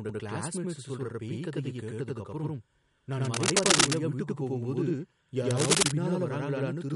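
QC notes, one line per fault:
Throughout: channel delay (doubling). One channel arrives 92.88 ms late and the two are summed to mono, which fits a 4096-sample buffer offset. The late copy is heard as a separate slap echo at the same level, doubling every syllable.
Throughout: MP3 compression. The speech sounds watery and swirly, with plainly audible codec damage, smeared attacks and chirpy s sounds. There is nothing above 11.2 kHz. This is likely a low-bitrate MP3 encode, around 52 kbps, where weak frequency lines are zeroed and switch on and off between frames.
3.25–3.91 s and 5.50–5.83 s: cable scratch noise. Dense, uneven bursts of scratching and rustling sit over the speech, somewhat louder than the speech itself. The likely cause is a worn cable, connector or control carrying DC being moved, so its contact resistance changes rapidly.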